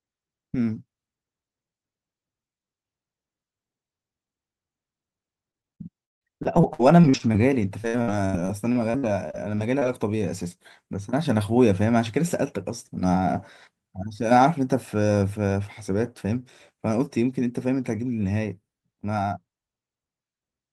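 From 5.51 to 9.83 s, repeated packet loss makes the speech choppy. Dozens of brief dropouts, up to 170 ms, are patched by stretching earlier sound.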